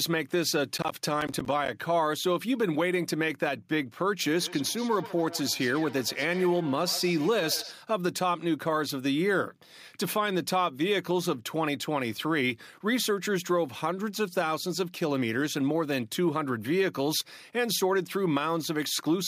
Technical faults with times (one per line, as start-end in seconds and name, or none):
0.78-1.68 processor overload crackle
4.40-7.77 feedback echo between two devices